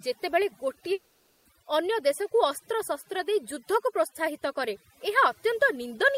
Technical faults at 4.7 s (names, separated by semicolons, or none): overdone noise removal